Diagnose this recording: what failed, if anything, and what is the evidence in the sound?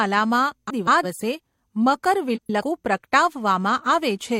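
Frames out of order at 0.70–1.05 s and again at 2.36–2.62 s, a network or transport fault. In each stretch the speech sounds garbled and fluttery. Two adjacent runs of coded frames reached the decoder in swapped order and were played that way. The first uses blocks of about 171 ms each, which fits runs of four frames. The second uses blocks of 128 ms, which fits runs of three. No time is lost.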